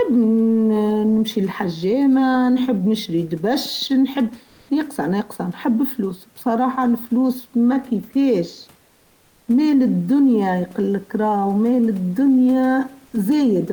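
Comfort noise in place of the background appears from 4.51 to 4.69 s and again from 8.89 to 9.43 s, during pauses in the speech. The real room noise, about 36 dB below the speech, gives way to a smooth, detail-free hiss. Here it comes in about 6 dB louder for 180 ms, then about 2 dB quieter for 540 ms. This is likely Opus DTX: the sender goes quiet and the receiver synthesises filler noise until the speech resumes.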